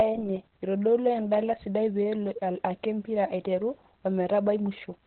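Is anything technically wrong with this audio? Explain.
Yes, the whole speech clip carries heavy Opus voice compression: nothing above 4.3 kHz survives, and the coarse coding makes it muffled, hoarse and slightly robotic, which fits narrowband SILK at roughly 8 kbps.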